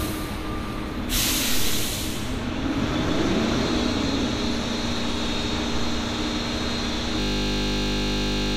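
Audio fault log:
7.2–8.56 s, system hang loop: A 20 ms slice of sound repeats exactly until the end. The 50 Hz repeat rate makes a steady buzz. The system froze while the hardware kept replaying one buffer. About a second and a half of audio is lost.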